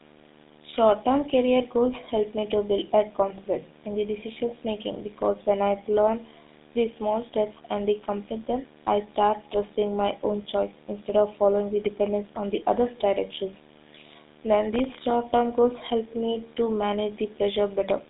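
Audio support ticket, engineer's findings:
Video or display buzz, whole clip: steady 75 Hz buzz with hash riding on top, roughly 20 dB under the speech. Probable culprit is a screen or video cable coupling into the audio line at a 75 Hz field rate. Check grounding and cable routing.

GSM full-rate codec, whole clip: plainly audible buzzy, gravelly roughness on the speech, band squeezed to about 200 Hz to 3.7 kHz with nothing above 3.8 kHz. Vocal-tract model driven by sparse regular pulses, consistent with 13 kbps full-rate GSM somewhere in the chain.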